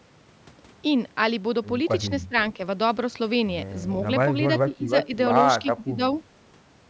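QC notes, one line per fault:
2.28–2.34 s, 4.62–5.13 s and 5.61–6.01 s, speech suppressed in double talk: the echo canceller was likely unable to separate the near talker from loudspeaker echo while both sides spoke, so it pulled the whole signal down. The speech dips by up to about 15 dB in patches, a brief duck of well under a tenth of a second at first, then broken stretches of a few hundred milliseconds late in the clip.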